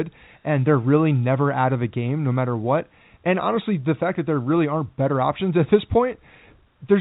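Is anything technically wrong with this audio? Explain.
No, the speech comes through G.711 telephone coding working as designed, band-limited to below 4 kHz with the codec's faint level-following quantisation noise and no other technical fault to be heard.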